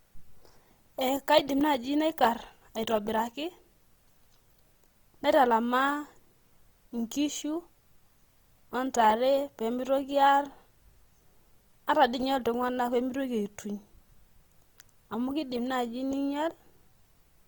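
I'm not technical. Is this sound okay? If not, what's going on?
No. From start to finish the speech sounds grainy and rough, likely from Opus compression squeezing it too hard, but without the swirly, watery holes of MP3 damage.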